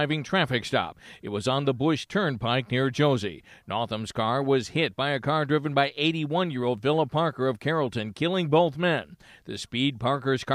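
Nothing stood out on listening to this speech recording.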